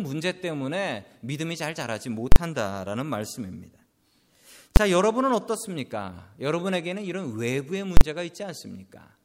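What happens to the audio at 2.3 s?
At 2.32 s you get invalid numbers at full scale: a calculation blew up, pinning the output to an extreme value for a 40 ms block, so it lands as one sharp bang.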